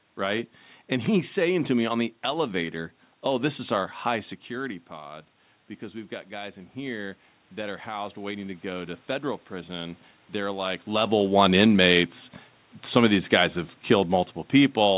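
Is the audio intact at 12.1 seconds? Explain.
Yes, the audio is intact at 12.1 seconds, with no fault at that moment.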